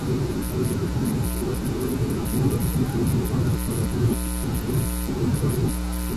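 No technical faults can be heard anywhere in the speech. At no point does the sound give away a moment where the audio chain went wrong.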